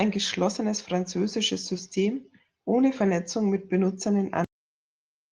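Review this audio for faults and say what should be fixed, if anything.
A brief rough, noisy patch between 3.05 and 3.07 s: the audio doesn't drop out, but for about 20 ms it sounds coarser and grainier than what surrounds it. That is a lost packet rebuilt from error correction. The duration fits a single lost packet, and the following packet carried a low-bitrate backup copy of it (Opus in-band FEC), so the decoder played that reduced-quality copy instead of leaving a hole. To prevent it, improve network reliability or jitter buffering so packets arrive intact rather than relying on the FEC copy.

At 4.44 s the sound stops abruptly mid-utterance and falls straight to digital silence with no natural decay, staying silent to the end. This is a cut-off end: the final buffers were never written out or played, so everything after that point was simply lost rather than faded or trimmed. To prevent it, make sure the recorder or player flushes and drains all pending buffers before closing the stream.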